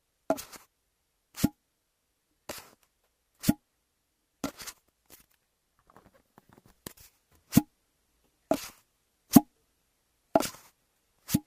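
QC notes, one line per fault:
No faults to note for this clip.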